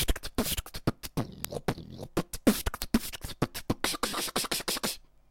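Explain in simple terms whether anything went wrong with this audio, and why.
Something did go wrong. From 0.27 s to 5.18 s there are sharp little ticks, about five per second, around thirty in all. Their strength varies. These are word clock ticks. The sound passed over a digital link to a device running on its own clock, not locked to the sender's. The two clocks disagree by roughly 100 parts per million. Each time they slip past each other, one sample is dropped or repeated, and that glitch is the tick.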